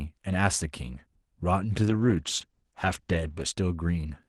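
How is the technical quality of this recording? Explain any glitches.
The speech has one glitch, a call bitrate drop. The rest passes through an Opus call path with its high end cut near 12 kHz.

From 1.85 to 3.53 s the speech turns rough and muffled for about 1.6 s, which fits the encoder falling from 32 to roughly 14 kbps.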